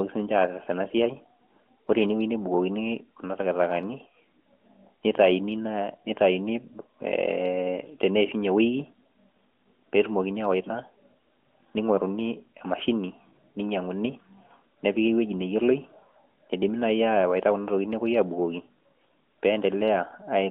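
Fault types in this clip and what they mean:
No faults can be heard.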